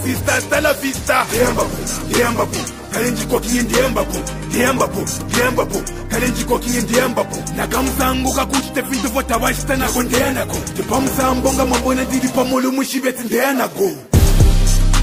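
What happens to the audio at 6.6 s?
Nothing goes wrong at 6.6 s; the audio runs through that moment intact, with no audible fault.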